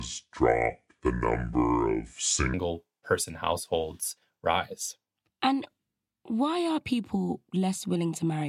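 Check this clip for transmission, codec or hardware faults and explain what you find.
One fault is present: a section at the wrong speed. From 0.00 to 2.54 s the speech plays at 0.673 times its recorded speed. Pace and pitch fall together, about seven semitones lower. The voice sounds deep and dragged. The likely cause is playback or editing against the wrong clock.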